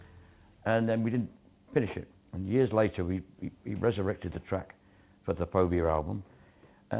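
No faults can be heard anywhere in the recording.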